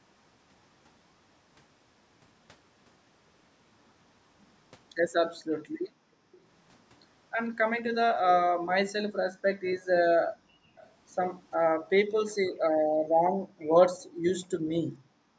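A speech recording from a call, band-limited to nothing above 8 kHz by normal call microphone processing, with two faults. The room background is gated by the echo canceller at 5.65–6.32 s, 9.14–9.27 s, 10.32–10.76 s, 11.7–11.75 s and from 12.74 s to the end. Each time the canceller pulls the microphone down by as much as about 40 dB (about 33 dB at 11.7 s), so the ambience drops away and returns. On a spectrogram the background noise floor turns into dark vertical gaps, and the waveform flattens to near silence between words. There are also faint delayed repeats at 6.32–6.41 s, 9.81–10.87 s and 13.6–13.67 s, which is likely echo leak: loudspeaker sound that got past the far side's echo cancellation and came back. The copies trail the original by 448 ms and sit roughly 30 dB below the speech, showing on a spectrogram as weak ghost traces of the preceding harmonics, offset in time.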